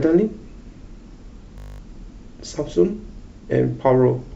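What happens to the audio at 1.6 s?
A system hang loop occurs there: from 1.58 to 1.8 s the driver stalls while the hardware keeps replaying one 20 ms stretch of its buffer, eleven times. At a 50 Hz repeat rate this becomes a steady buzz, with virtually no audio skipped.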